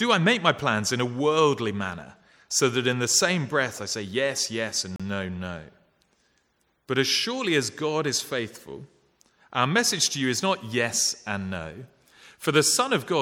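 From 4.96 to 5.00 s the sound cuts to silence for 36 ms, a Bluetooth stall, likely from radio interference delaying packets until the headphones' buffer ran empty. Unlike a codec glitch or dropout burst, the gap is clean silence with no warble, noise or repeated fragment.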